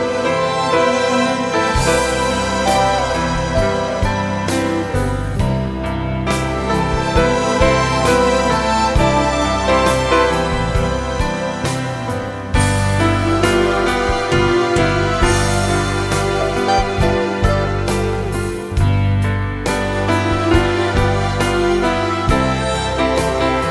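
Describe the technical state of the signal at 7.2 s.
At 7.2 s the signal is intact, with no audible dropout, distortion, glitch or other technical fault.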